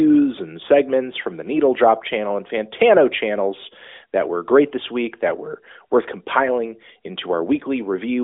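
No technical faults are audible.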